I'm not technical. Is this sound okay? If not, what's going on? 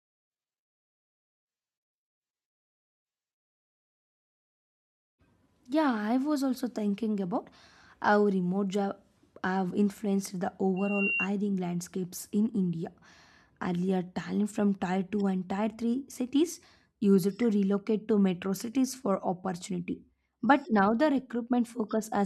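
No. From 10.76 to 11.28 seconds, just after "have influenced the" and before "landscapes in", a thin, piercing whistle at about 2.8 kHz swells up over roughly a third of a second into a squeal as loud as the speech itself. This is loudspeaker feedback squeal: the microphone picked up sound from the speaker it was feeding, and that one pitch kept looping round and growing.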